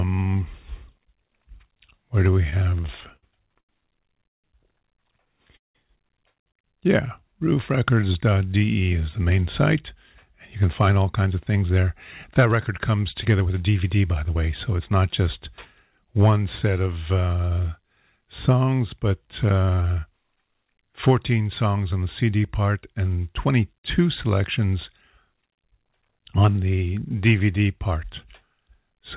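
Right after "where do", from 2.34 to 4.45 s, the speech shows repeated stalls (stutter). Packets kept reaching the receiver late, so its jitter buffer ran dry 13 times, and each gap was bridged by extending the last sound. About 404 ms was filled in this way, roughly 19% of the span, with the longest gap at 158 ms. Nothing is lost, but the phrase drags and hiccups.

At 5.57 to 5.77 s comes a call audio freeze. The sound holds briefly and then drops out, leaving 170 ms of silence inside the 180 ms fill. The cause is likely packets held up in transit, which emptied the buffer and pushed the playout delay up by 180 ms. Speech resumes where it stopped, with nothing missing, only a pause inserted.

From 6.87 to 8.40 s, ending just before "is the main site", there is a jitter buffer slow-down. To build up its reserve, the receiver repeated single pitch periods and added 130 ms, so playback runs at 92% speed with the pitch unchanged. 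A second slow-down, from 19.23 to 20.01 s, is stronger at 85% and adds 125 ms. Sounds are drawn out there.

Between 10.55 and 14.91 s there is a jitter buffer speed-up. The buffer was holding more audio than its target, so it trimmed short pitch-period pieces, roughly 0.4 s in total, and speech plays at 110% at the same pitch. It sounds hurried. The same happens after "songs on", from 21.98 to 23.18 s, again at 110%, with around 0.15 s removed. Throughout, nothing is heard above 4 kHz, which fits a G.711 mu-law narrowband call path.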